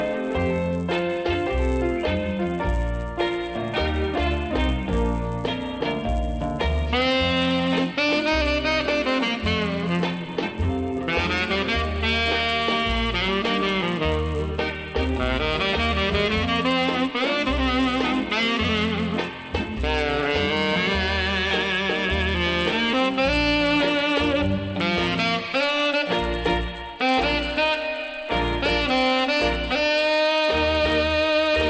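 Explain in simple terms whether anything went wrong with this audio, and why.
A steady 100 Hz buzz runs under the sound throughout: resampler restarted on every block, so each 10 ms chunk's edges carry a small error.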